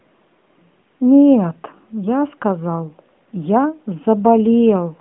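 Nothing stood out on listening to this narrowband mobile-phone speech recording.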